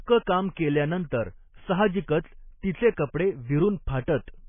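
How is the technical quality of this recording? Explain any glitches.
Technical quality is poor. Heavy MP3 compression is the likely cause of the damage, present throughout the speech. Short of bits, the encoder has removed all treble above 3.5 kHz, which points to a very low bitrate in the region of 16 kbps, and it drops weak frequency components that come and go between frames. As a result the speech sounds dull and muffled, with a watery, swirling texture, metallic chirps on s sounds, and smeared consonant onsets.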